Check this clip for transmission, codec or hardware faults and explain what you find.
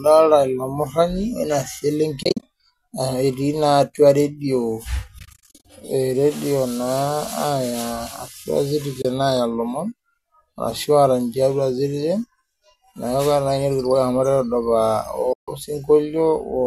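The speech has repeated dropouts from AAC frame loss with muting, at 2.23–2.43 s, 5.19–5.65 s, 9.02–9.05 s and 15.33–15.48 s. The first two are clusters of short gaps, the longest lasting about 50 ms and 40 ms. The decoder zeroes each missing frame, and the overlapping windows fade the sound out and back in. This leaves soft-edged holes. The grouping fits short frames of about 10 ms, as in the low-delay AAC compression the link likely uses, which itself adds only slight roughness.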